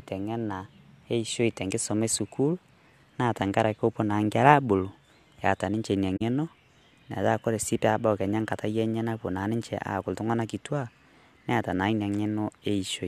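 At 6.16 s, just after "abuulu eata ninche enia", a corrupt frame concealed event cuts into the speech. It lasts about 60 ms, to 6.22 s, a span that fits two damaged AAC frames. Flipped bits spoiled those frames, and the decoder caught the damage. It then covered the gap itself instead of playing garbage.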